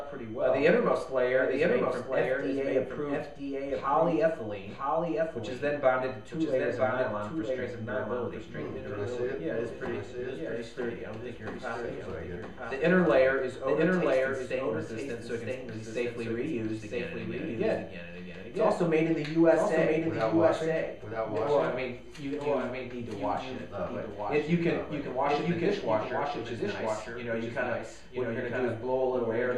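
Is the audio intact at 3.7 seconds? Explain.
No. At 3.7 seconds, as throughout the clip, there is a doubled audio track: a second full-band copy of the same sound runs about one second behind the original and roughly 5 dB quieter. It likely comes from the signal being captured again through a slower path or from an edit holding two copies out of step. Unlike an echo or reverberation, the repeat is a single copy with no decay and no added room colour.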